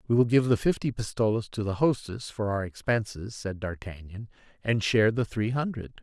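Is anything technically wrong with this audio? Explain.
No, nothing in this recording stood out as technically wrong on listening.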